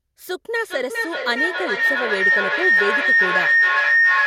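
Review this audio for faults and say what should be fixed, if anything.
A feedback howl starts at 0.61 s and runs to the end of the clip. Two devices on the same call are sharing one room. Each trip from loudspeaker to microphone and back adds level. The sound narrows to a tone of around 2 kHz and peaks about 7 dB above the speech. It pulses roughly every 400 ms, the delay of the loop. To prevent it, mute and disconnect the second device's microphone and speaker, or keep only one device on the call in that room.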